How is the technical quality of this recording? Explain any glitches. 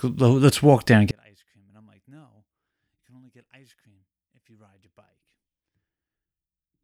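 There's one real problem here, and it takes over most of the clip. From 1.11 s, right after "let's walk there and", the speech drops by about 37 dB and turns faint and distant. That's likely one channel inverted: with one side's polarity flipped, the centred voice cancels when the two channels sum to mono, leaving only a faint difference signal to the end.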